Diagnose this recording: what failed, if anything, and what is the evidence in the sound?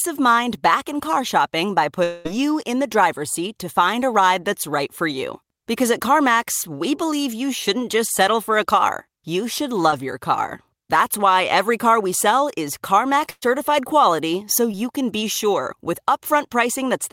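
Network, long network dropout. From 2.03 to 2.27 s the sound is replaced by a continuation of what came just before: a buzzy, hissy extension of about 214 ms that carries through the whole gap with no fall to silence. Roughly 220 ms of the original audio never returns; playback picks up further on. The likely cause is a stall in packet arrival long enough that the receiver ran concealment across the entire hole.

Network, short concealed packet loss, heard twice. At 9.91 to 9.94 s, between "a car you should" and "your car", and at 14.72 to 14.77 s, between "quality so" and "can be sure with", there is a brief smear where about 20 ms of audio failed to reach the decoder in time. The receiver extrapolated the preceding sound for about 13 to 14 ms and crossfaded back. The second event also adds around 10 ms, a slight timing stretch.

Network, burst of packet loss. From 13.30 to 13.44 s, just before "quality so", roughly 120 ms of consecutive audio was lost or arrived too late to play. 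The decoder extended the last sound for about 117 ms and attenuated it progressively, and it falls to about 30 ms of silence before real audio resumes. The result is a held, fading continuation of the last sound followed by a jump forward, with the material in between gone.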